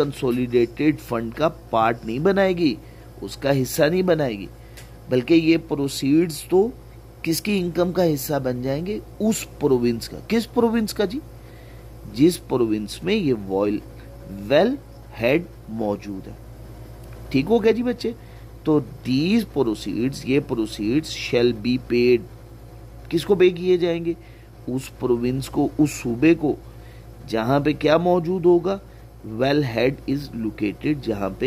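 Nothing here calls for a fix, since the audio runs along without a single technical fault turning up anywhere in it.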